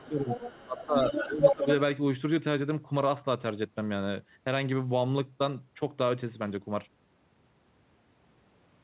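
From 0.00 to 0.30 s the speech is suppressed in double talk: it sinks by something like 15 dB and loses its edge, most likely because an echo canceller, hearing both sides at once, turned its own talker down along with the echo. A waveform shows the envelope pinched low, and a spectrogram shows the upper harmonics fading toward the 4 kHz ceiling of the G.711 call path. The same dips return at 0.66 to 0.97 s and 1.26 to 1.67 s.

The other side's voice is leaking through, faint at 0.00 to 0.05 s, far below the speech. From 0.30 to 1.74 s it is as loud as the talker. This is likely loudspeaker sound the echo canceller failed to remove from the microphone. It sounds like a second voice overlapping the first. On a spectrogram, a second set of harmonic stripes runs across the main one with a different pitch contour.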